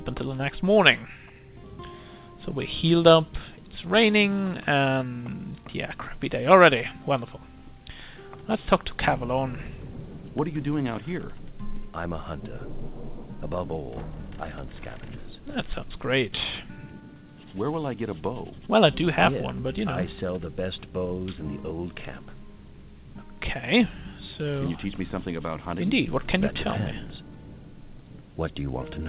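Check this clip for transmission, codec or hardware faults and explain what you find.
No faults found.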